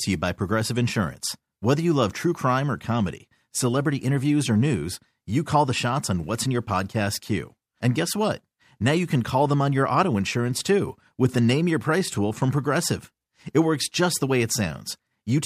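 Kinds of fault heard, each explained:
No technical fault can be heard anywhere in the speech. There is nothing here that calls for an explanation.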